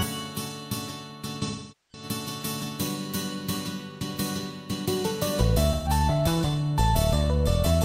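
AAC frame loss with concealment occurs from 1.42 to 2.04 s and again from 5.72 to 5.89 s. The decoder rebuilds missing frames from the last good spectrum. The 0.43 s gap, consistent with roughly ten lost frames, smears and fades before recovering. The 0.13 s gap leaves a brief noisy, phasey patch.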